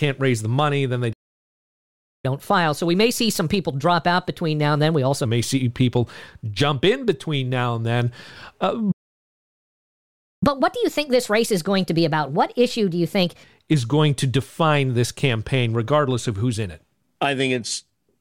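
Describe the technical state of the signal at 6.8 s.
At 6.8 s the speech signal is intact, with no audible technical fault at that moment.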